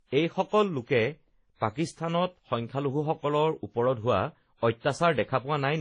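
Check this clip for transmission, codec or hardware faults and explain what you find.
There's one problem, and it runs the whole way through this speech: transcoding between lossy codecs, likely a low-rate WMA pass at around 32 kbit/s followed by Vorbis near 28 kbit/s. The second encoder spends bits on the first's artefacts, so you hear both sets of artefacts stacked, and nothing survives above about 10.1 kHz.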